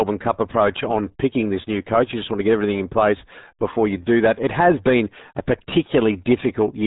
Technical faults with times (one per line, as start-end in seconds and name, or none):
0.00-6.86 RealAudio 14.4 codec